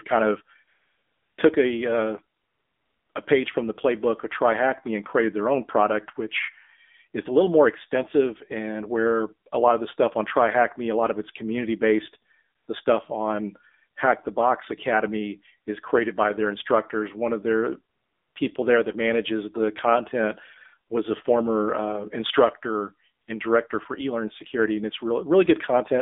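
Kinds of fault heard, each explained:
AMR narrowband mobile codec: The whole clip is speech passed through the AMR-NB mobile codec at 7.4 kbps, which models the voice from a small set of pulses per frame instead of sending the waveform itself. At this low rate the result sounds plainly buzzy and synthetic. On a spectrogram the energy sits between about 250 Hz and 3.6 kHz, with a hard, flat ceiling and nothing above it.
AMR comfort noise: The phone treated pauses as silence, stopped sending speech frames, and the receiver filled them with smooth synthetic hiss. This happens at 0.68–1.38 s, 2.38–3.10 s (after "took a uh"), 3.12 s, 12.56–12.68 s, 17.96–18.36 s (after "of their") and 23.22–23.28 s. Each gap sounds like a steady, even noise floor that switches in and out abruptly. On a spectrogram it shows as flat, uniform patches with sharp edges.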